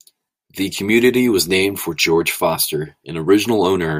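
Nothing in the recording stood out as a technical problem on listening.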